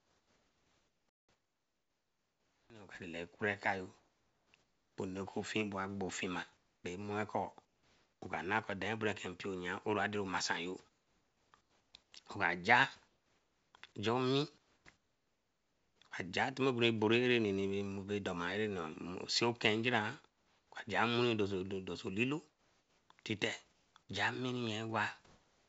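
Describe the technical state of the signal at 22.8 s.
At 22.8 s the real background goes flat and featureless from 22.50 to 23.94 s, just after "so olilo": comfort noise in place of the background, likely from discontinuous transmission.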